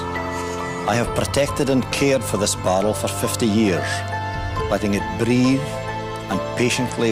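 Nothing in this recording stood out as a technical fault on listening.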